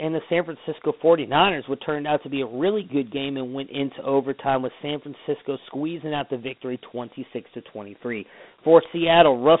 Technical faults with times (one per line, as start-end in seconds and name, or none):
0.00-9.60 Dialogic VOX ADPCM